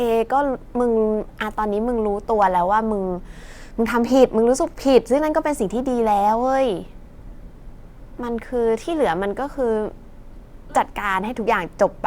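From 7.19 to 7.35 s the speech breaks into a brief garbled flutter. This is frames out of order: two neighbouring 80 ms blocks, which fits runs of four frames each, were decoded swapped, so no time is lost.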